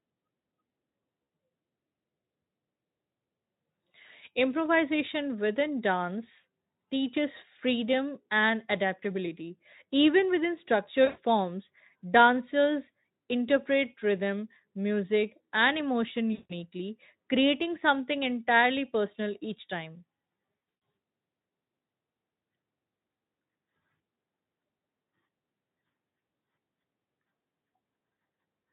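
A brief buzzy smear fading into coloured noise breaks the speech at 1.23 s for 60 ms, at 11.05 s for 120 ms just before "forms dancers interpret rhythm", at 16.33 s for 160 ms after "rhythm music and emotion", and from 20.57 to 20.81 s after "entirely personal each time", in scattered gaps with the longest lasting 120 ms. This is VoIP packet loss concealed by the speech codec: the Speex decoder stretched its last pitch and filter across missing packets, fading the level.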